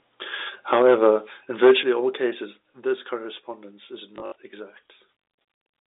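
Microphone overload at 0.72 to 1.07 s: the loudest peaks flatten at the converter's ceiling, pushing about 3 dB past it, so a few percent of samples are clipped and the syllable tops turn harsh and crackly. The likely cause is an input volume set too high. Microphone volume stepped down at 0.82 s: in the middle of that distorted stretch, the level of both the voice and the room drops in one step by about 4 dB, likely as the call software pulls the device gain back after detecting clipping.

Microphone overload returns at 1.63 to 1.72 s, just before "all cases", and is worse. Peaks exceed the limit by about 5 dB and roughly a fifth of the samples are cut flat, giving a gritty, buzzing distortion on that burst. Microphone volume stepped down again at 1.83 s, just before "all cases", this time by about 7 dB. The sudden drop in loudness follows the second clipped burst, as software reacting to the overload would produce.

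Packet loss with last packet repeated at 4.16 to 4.36 s, right after "correspondence is": about 120 ms of audio is missing, scattered across 200 ms, with the longest gap lasting 60 ms. The receiver fills each gap by replaying the last packet it received. The stretch stutters with a brief robotic buzz, which fits 20 ms packets. All of this passes through the telephone-band G.711 coding, which caps the sound at 3.7 kHz.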